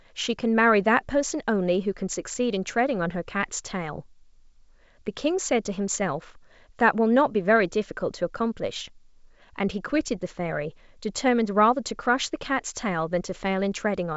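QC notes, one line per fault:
Nothing to flag here: the speech comes through G.722 wideband telephone coding at what sounds like the full 64 kbit/s rate, with the top end stopping around 7.7 kHz just as that path should.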